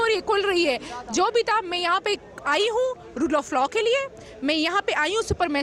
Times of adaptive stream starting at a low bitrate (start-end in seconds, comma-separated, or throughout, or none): 0.00-4.00